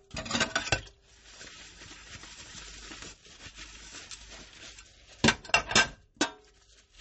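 A short non-speech sound recording carries plainly audible MP3 compression artefacts from start to finish, likely from encoding at a very low bitrate, which fits roughly 32 kbps. Weak spectral detail flickers in and out, giving a watery, swirling texture with smeared attacks. A spectrogram would show patchy, blocky holes in the quieter bands.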